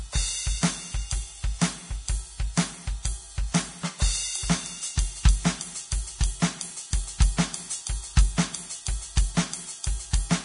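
Music, with heavy lossy-codec damage running through the whole clip that is likely Vorbis compression at a low setting. Nothing is left above 10.6 kHz, so the top octave is simply missing. The treble that remains is grainy and hissy, because the coarse quantisation has traded fine detail for noise of similar energy. Tones sound roughened and attacks are smeared. That degree of damage fits a bitrate in the region of 31 kbps.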